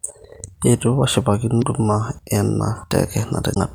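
Damaged data in a compressed stream appears twice, from 1.58 to 1.64 s and again from 3.52 to 3.57 s, each lasting under 60 ms. At those points the encoded bytes feeding the decoder were corrupt, so it could not interpret the affected frames correctly and had to regain sync at a later frame header. The speech is interrupted there by a brief chirp, squawk, click or short hole that does not belong to the recording.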